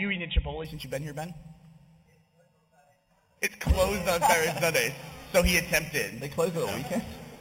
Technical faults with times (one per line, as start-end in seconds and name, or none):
0.65-7.41 imaging from sample-and-hold upsampling